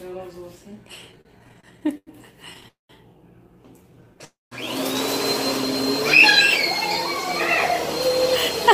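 Repeated stalls (stutter) run from 1.11 to 2.66 s: packets arrive late, the jitter buffer keeps emptying, and seventeen brief held-over gaps, the longest 93 ms, make the sound drag and stutter.

A call audio freeze follows at 2.68 to 2.91 s. The last sound is held, then fades into about 0.15 s of silence before resuming where it stopped.

Jitter buffer slow-down at 3.78 to 4.21 s: repeated pitch periods add 54 ms to rebuild the reserve, so the sound runs at about 89% speed with unchanged pitch.

A second call audio freeze at 4.25 to 4.53 s holds and fades into about 0.18 s of silence. Both freezes are likely caused by delayed packets emptying the buffer, inserting gaps without losing audio.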